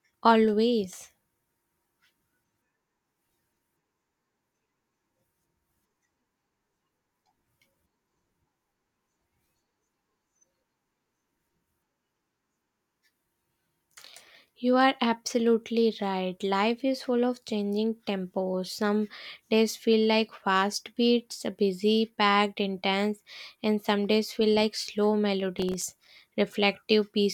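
A speech clip with a burst of processor overload crackle from 25.59 to 26.22 s, just after "days feel like slow". The processor repeatedly misses its buffer deadlines, and each miss drops a hole of silence with hard edges, which fits buffers of about 3 ms. Around twenty such gaps give a gritty tearing over the speech. On the waveform these show as brief near-silent dropouts; on a spectrogram, as scattered thin vertical broadband streaks.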